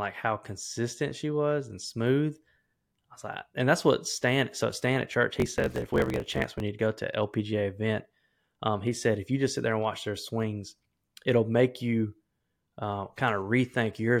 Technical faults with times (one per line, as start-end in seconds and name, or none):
5.34-6.62 block size mismatch (truncated)